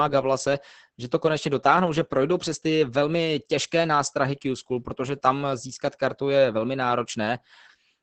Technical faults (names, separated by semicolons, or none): Opus voice compression